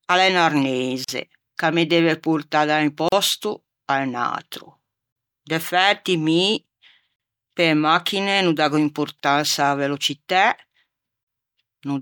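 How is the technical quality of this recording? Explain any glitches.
The speech is interrupted by short, regularly spaced silences. There are six gaps at a join of encoded pieces, at 1.04, 3.08, 5.12, 7.16, 9.20 and 11.24 s. Each lasts about 38 ms (the first about 41 ms) and recurs every 2.0 s. Separately encoded pieces were joined with each run's start-up delay and end padding left in. Unlike a packet dropout, the cuts are evenly timed, have smeared edges, and the speech resumes exactly where it stopped.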